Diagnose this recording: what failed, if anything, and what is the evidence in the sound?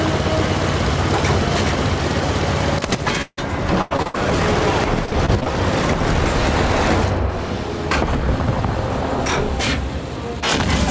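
Gain pumping, at the input stage, runs through the whole recording. The background swells in each gap and ducks by about 5 dB under every loud sound. On the waveform the noise floor visibly rises and falls. The likely cause is input gain set far too high, with a fast limiter clamping each peak.

A long network dropout runs from 3.22 to 3.39 s. About 150 ms of fading buzz continues the last sound, then roughly 40 ms of silence, and the audio resumes with about 160 ms lost. A spectrogram shows a smeared, decaying band, then an empty gap. The likely cause is a network stall with the receiver concealing the loss.

Repeated packet loss (robotic sound) hits 3.81 to 4.16 s, with four gaps up to 93 ms and 59% of the span patched. It recurs at 5.06 to 5.48 s, with six gaps up to 23 ms and 23% patched. The spectrogram shows choppy, frozen harmonic slices.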